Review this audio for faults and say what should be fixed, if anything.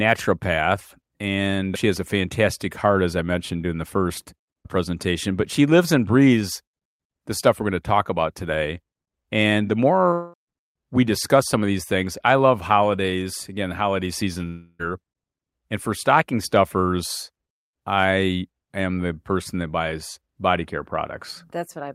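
A long network dropout is the likely cause of two buzzy, fading fills, at 10.13–10.35 s before "we discuss some of" and at 14.47–14.81 s after "holidays again the holiday." Roughly 0.2 s and 0.32 s of speech are lost and replaced by a decaying continuation of the preceding sound. On a spectrogram these show as smeared, frozen harmonics fading out, and the waveform has a smooth decaying envelope rather than a hard gap. A larger jitter buffer with packet redundancy or forward error correction on the link would prevent this.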